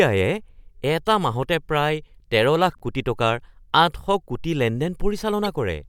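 Corrupt frames decoded at 1.06 s, 2.72–2.83 s and 5.45–5.49 s. Damaged compressed data misplaced energy across frequencies, producing short chirps and noise blips, the last loudest at about -15 dBFS.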